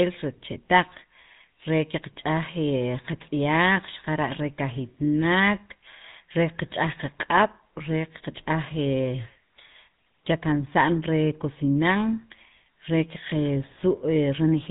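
From start to finish the speech carries the coarse, buzzy grain of the GSM full-rate codec, and the damage is plainly audible. The codec rebuilds speech from a vocal-tract model fed by a thinned, regularly spaced pulse excitation, which gives the gravelly roughness heard here, consistent with a 13 kbps stream. Nothing comes through above 3.8 kHz. A simple band-limit would sound muffled but smooth. This clip is both muffled and rough.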